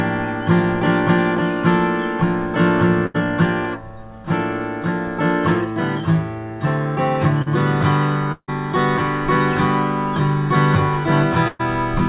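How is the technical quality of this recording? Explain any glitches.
The recording has four audible interruptions in the transmission, all of them losses in the network path. Throughout, the audio carries the grainy character of G.711 mu-law coding, at a rate that fits 64 kbps, with nothing above 4 kHz, as expected for a call.

Burst of packet loss, 3.06 to 3.16 s and 11.48 to 11.61 s. Roughly 80 ms and then 120 ms of audio never arrived. The receiver stretched the last sound to cover each gap, turning it into a held buzz or hiss that fades, then jumped ahead. On a spectrogram, frozen horizontal bands appear and dim. In the waveform, a repetitive, decaying stretch ends in an abrupt join.

Short concealed packet loss, 7.42 to 7.48 s. About 40 ms went missing, and the decoder extrapolated from the preceding sound before cross-fading back into the real signal. The result is a brief smear or wobble. 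In the waveform it shows as a short, overly regular patch. In a spectrogram it appears as a slightly blurred column where fine detail briefly vanishes, with no visible gap.

Long network dropout, 8.32 to 8.50 s, likely caused by a momentary loss of connection. About 160 ms of audio is gone. The last sound is continued as a fading buzz or hiss over a fill of roughly 150 ms, the last 60 ms or so of which is silence, before the audio resumes further on. The spectrogram shows smeared, decaying bands ending in a dark blank column. The waveform shows the envelope tapering to a flat line before the signal abruptly returns.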